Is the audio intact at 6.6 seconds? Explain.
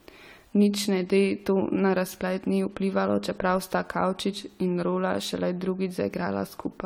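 No. Generation loss affects the whole clip, including 6.6 s. The speech sounds swirly, hollow and smeared, likely from repeated AAC re-encoding, roughly four passes near 64 kbit/s.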